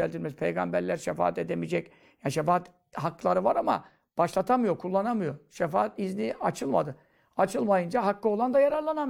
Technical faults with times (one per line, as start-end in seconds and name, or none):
none